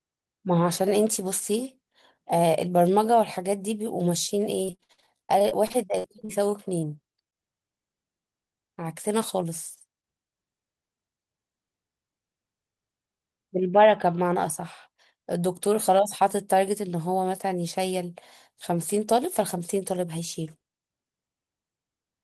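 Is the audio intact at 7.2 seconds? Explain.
No. Short concealed packet loss occurs at 7.12 to 7.16, 7.24 to 7.28 and 7.30 to 7.34 s. About 20 ms of audio failed to arrive each time, so the receiver extrapolated the preceding sound and blended back in, leaving brief smears or wobbles.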